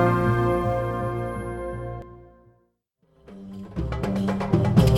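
A short burst of damaged data in a compressed stream appears at 2.02 s, heard as a brief chirp or blip. Corrupted bytes made the decoder misread the frame there, lose sync and search for the next valid frame header before resuming.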